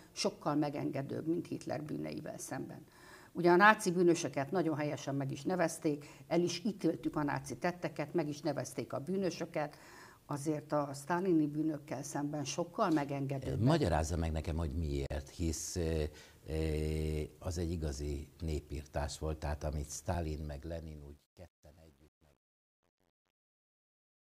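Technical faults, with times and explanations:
20.11 to 24.37 s, truncation distortion on a fade: The fade-out starting around 20 s drops smoothly in level, but the quietest part turns gritty. The stage doing the fade keeps too few bits and adds no dither. This fits about 10-bit resolution. As the signal shrinks toward the smallest step, the waveform collapses into a few coarse square steps. From 20.75 s to the end, the tail is at its worst.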